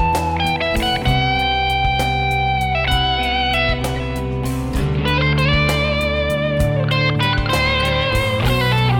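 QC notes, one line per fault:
No faults heard in this clip.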